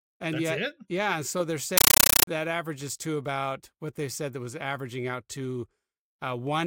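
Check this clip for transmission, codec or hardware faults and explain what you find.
One fault is present: a compressed stream played as audio, from 1.78 to 2.27 s, between "it yeah so they're" and "averages to about what". The speech is replaced by harsh, loud chattering static. Undecoded Dolby Digital frames were passed through as ordinary samples, each giving a 9.33 ms noise burst followed by silent padding, repeating at 31.25 Hz. This pattern fits a 448 kbps AC-3 stream.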